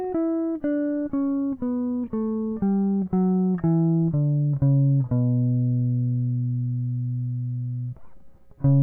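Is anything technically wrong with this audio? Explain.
No, nothing is technically wrong with this music.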